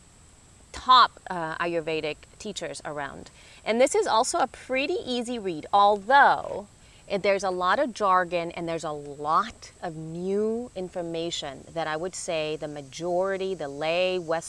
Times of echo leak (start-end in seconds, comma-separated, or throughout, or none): none